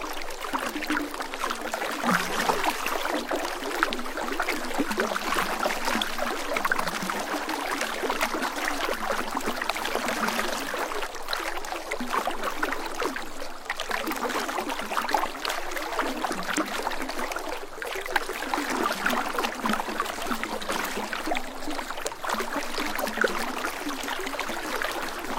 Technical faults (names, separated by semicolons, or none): none